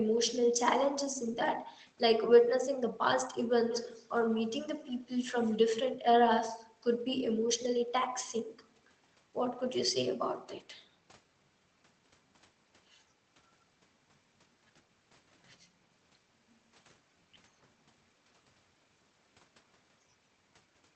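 From 3.69 to 4.1 s, a faint copy of the speech trails the original by 133 ms, sitting about 15 dB below it. This is an echo leak. Its likely cause is a far-end echo canceller missing some loudspeaker pickup.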